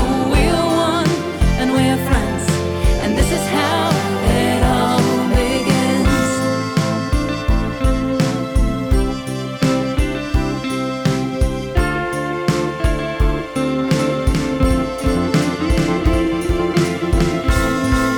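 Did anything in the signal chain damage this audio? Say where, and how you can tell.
Yes. A doubled audio track begins abruptly at 13.89 s and runs to the end of the clip: a second, full-band copy of the sound trails the original by roughly 400 ms, at about 5 dB lower. It has no decay and no room colour, so it is not an echo or reverb. It is likely either a second capture through a slower routing path or an edit that left two copies out of step.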